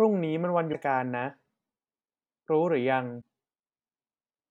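Damaged data in a compressed stream hits this speech twice, from 0.69 to 0.75 s and from 3.18 to 3.22 s. Corrupted bytes make the decoder misread frames and lose sync. Each spot sounds like a brief chirp, squawk, click or short hole.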